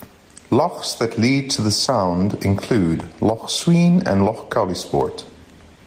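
Throughout this speech clip the gain pumps, swinging by roughly 15 dB and leaving the level squashed. This gain pumping likely comes from input gain set far too high, with a fast limiter clamping down on each peak.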